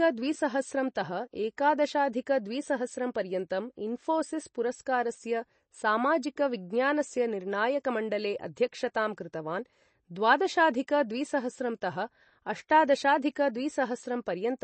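The damage runs through the whole clip. It is likely MP3 compression. Nothing reaches above 8.3 kHz, so the treble stops at a hard ceiling. The encoder is starved of bits. It drops the weakest frequency lines, and they flicker on and off between frames. The result is a watery, swirling texture. S sounds turn metallic and chirpy. Consonant onsets smear. The damage is plainly audible, which fits a low bitrate near 32 kbps.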